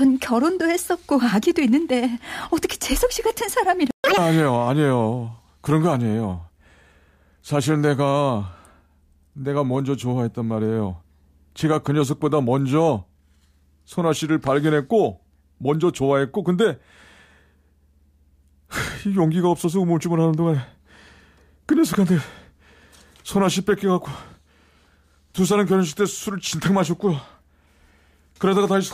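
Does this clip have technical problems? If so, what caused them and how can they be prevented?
Yes. At 3.91 s the speech cuts out into a playback stall and stays silent until 4.04 s, a gap of about 134 ms, before resuming from where it stopped. This is most likely the player running out of buffered data or having its audio thread blocked, so the output had nothing to send for that stretch. Keeping a deeper playback buffer and running audio on a high-priority thread that never waits on network or disk would prevent it.

Immediately after, from 4.04 to 4.17 s, the clip shows catch-up at higher speed. The backlog built up during the stall is resampled and played at 2.0 times normal speed, which also raises the pitch by around ten semitones and gives that brief stretch a sped-up, chipmunk-like quality before it drops back to normal rate. Recovering with pitch-preserving time-stretching, or simply dropping the backlog instead of resampling it, would prevent this.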